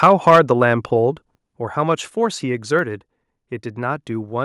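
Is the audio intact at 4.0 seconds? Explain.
Yes, the speech at 4.0 seconds is intact, with no audible fault at that moment.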